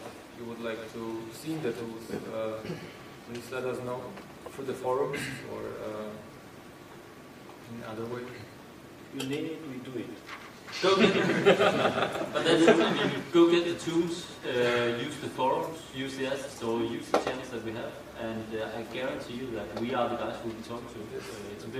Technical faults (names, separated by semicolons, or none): doubled audio track